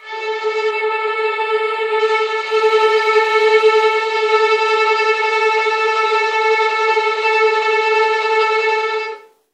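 From 0.71 to 1.99 s, channel delay causes comb filtering. One channel lags the other by only a few samples, well under a tenth of a millisecond. When the two are summed to mono, the first cancellation notch falls around 7 kHz, leaving the top end hollow and slightly dull.

From 2.20 to 4.31 s, the sound shifts from digital radio to analogue FM through a cross-fade of about 0.5 s, with a level change of about 1 dB. A steady hiss enters at roughly 35 dB below the signal.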